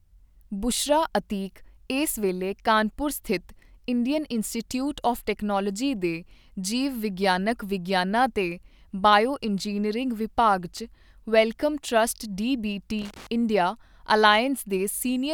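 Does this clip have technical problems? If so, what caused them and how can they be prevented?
Yes, there's a loose connector crackle from 12.99 to 13.27 s: a worn or dirty contact making and breaking, chopping the signal into a scratchy burst. Clean or reseat the connectors and replace worn cables before recording.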